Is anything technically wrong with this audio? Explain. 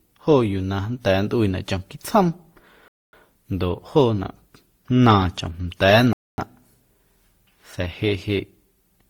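Yes. Two faults can be heard in this speech.

Throughout, the sound carries a layered mix of different coding artefacts heard together, with content reaching up to about 20.2 kHz. The likely cause is transcoding between lossy codecs, with the character pointing to low-rate Opus, then WMA, then Opus again. Each pass re-encodes the previous one's errors and adds its own. Unlike a single codec, two distinct kinds of artefact sit on top of each other.

At 2.88 to 3.13 s and again at 6.13 to 6.38 s, the audio stops dead for 250 ms, then resumes. These are gaps between chunks, falling every 3 s where the stream was split and a silence was left at each join. Unlike a dropout, no material goes missing. The sound is delayed and picks up exactly where it paused.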